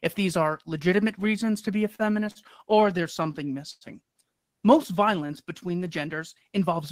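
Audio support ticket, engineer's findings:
Short stalls from late packets at 1.95–2.02 s and 2.31–2.38 s, both after "reasons to be a". The jitter buffer ran dry and the last sound was held about 37 and 43 ms. Nothing was lost.

Repeated stalls (stutter) from 2.75 to 3.84 s. Eight gaps, longest about 100 ms, about 16% of the stretch filled in. Packets kept arriving late, so the receiver kept extending the last sound and dragging it.

Jitter buffer slow-down from 4.51 to 5.29 s, just before "between the". Pitch periods were repeated to rebuild the reserve, adding 60 ms. That runs at 93% speed with no pitch shift, so it sounds drawn out.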